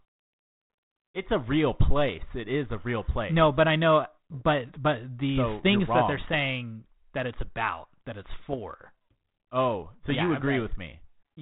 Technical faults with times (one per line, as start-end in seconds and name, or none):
4.32-4.43 bit errors on an ADPCM link
6.17-6.35 bit errors on an ADPCM link
8.40-8.54 bit errors on an ADPCM link
10.05-10.21 bit errors on an ADPCM link